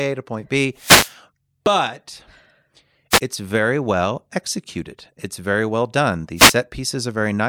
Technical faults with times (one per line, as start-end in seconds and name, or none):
0.75-1.15 wireless microphone noise hit
3.11-3.20 wireless microphone noise hit
6.36-6.55 wireless microphone noise hit